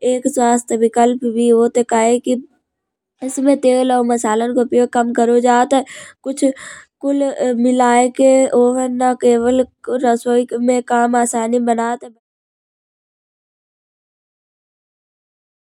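Nothing stood out on listening, with the speech easing down in a smooth editorial fade-out from roughly 11.5 s that completes at 12.2 s.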